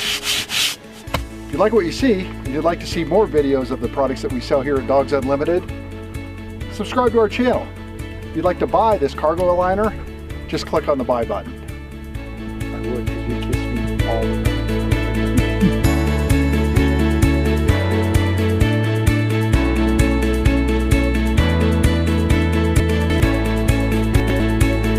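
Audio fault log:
22.8–23.2 s and 24.2–24.4 s, chunks out of order: a 100 ms chunk plays three chunks late, then one chunk late. Nothing is missing, but the sequence is scrambled, giving a brief jumbled passage with three hard joins each time.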